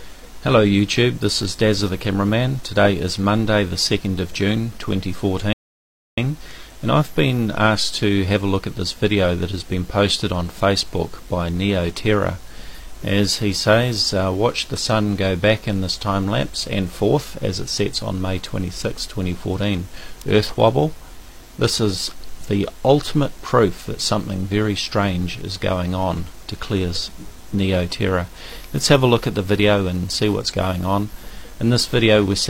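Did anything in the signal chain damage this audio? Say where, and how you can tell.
Yes, a rebuffering stall at playback: from 5.53 to 6.18 s the sound drops to silence for about 0.65 s, then resumes exactly where it stopped. The player ran dry of downloaded audio. The waveform shows a flat gap, and the spectrogram a blank vertical band.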